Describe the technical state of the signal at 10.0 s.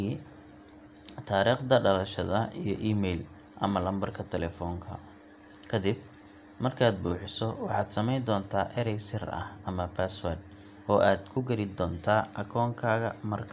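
The speech signal at 10.0 s is intact, with nothing wrong to be heard at that moment.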